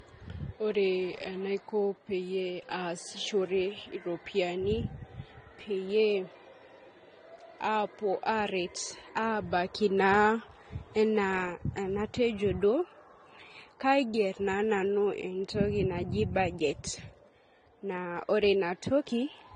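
Transcoding between lossy codecs is the likely problem in this speech clip. The sound points to a low-bitrate AAC-LC encode, around 32 kbit/s, re-encoded to Vorbis at a similar rate. The second encoder spends its scarce bits reproducing the first one's artefacts while adding its own, so artefacts from both layers are heard together throughout. The lowest cut-off in the chain survives, leaving nothing above 9.7 kHz and a dull top end.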